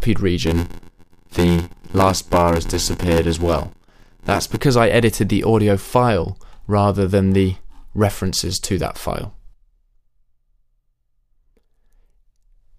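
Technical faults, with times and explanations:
0.45–4.60 s, block size mismatch (padded): a stage downstream reads blocks larger than the ones it is handed, which fits a 512-sample read, and tops up each block with silence. That puts a short gap in every block, heard as a buzz at about 86.1 Hz, the block rate. Because each block carries less real audio than its full length, the sound runs slower, at 0.861 times normal speed, while its timbre stays intact.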